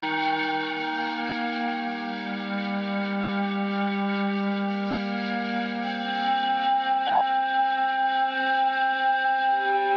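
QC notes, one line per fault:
1.29–1.32 s, 3.24–3.29 s, 4.91–4.97 s, 7.07–7.21 s, lost LE Audio frames: the Bluetooth LE Audio link dropped about 22, 45, 45 and 75 ms of audio, the last two scattered over 60 and 135 ms in short runs. The LC3 decoder fills each gap by repeating the last spectrum with random signs, so the music's tones smear into brief noisy patches. The gap lengths fit 7.5 ms frames.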